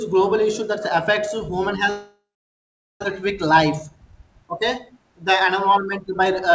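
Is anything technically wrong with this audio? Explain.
Yes, two faults stand out in this speech clip, which has nothing above 8 kHz, as fits a G.722 call path.

Long network dropout, 1.90 to 3.06 s, right after "affects human": the sound smears into a fading buzz, then about 0.79 s of near-silence, and about 1 s of speech never returns. This is likely a stall in arriving audio, which the receiver papered over before going quiet.

Jitter buffer speed-up, 3.22 to 4.49 s: the speech runs about 8% fast at unchanged pitch, sounding hurried. The receiver, holding surplus audio after the gap, snipped short pitch-period pieces repeatedly, trimming roughly a tenth of a second of delay.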